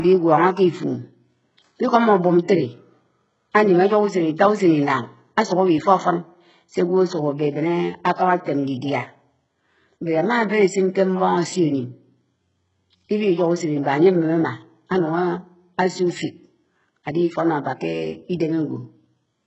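Throughout the speech there is heavy HE-AAC compression damage, and the cause is likely a very low bitrate, something around 8 kbps. Above the band coded at full detail, the treble is rebuilt from copied lower bands, so s sounds come out gritty and metallic and the upper harmonics sound misaligned. Nothing reaches above 8 kHz. On a spectrogram there is a hard ceiling at 8 kHz, with smeared, blocky, repetitive texture in the highest band.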